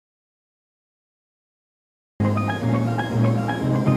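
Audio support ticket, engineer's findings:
Audio dropout to silence, 0.0–2.2 s, already under way when the clip opens. Silent, no room tone, no noise floor. Sound comes in abruptly at 2.2 s, mid-flow rather than from a natural start. Likely input loss upstream, such as a disconnected device, a dropped link or a stray mute, with the recorder still writing silence. Anything occurring before 2.2 s is unrecoverable. Check the input chain and the mute state around capture start.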